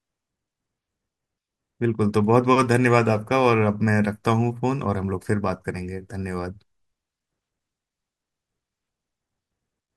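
Nothing in this recording of speech stands out as a technical fault; it runs along without any glitch worth pointing to.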